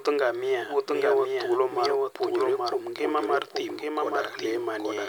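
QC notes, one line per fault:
throughout – doubled audio track: the speech is overlaid by a clean, full-band second copy roughly 0.7 s behind and about 5 dB quieter, with no decay or room colour, so everything sounds overlapped. Likely the signal is mixed in twice through a slower second path.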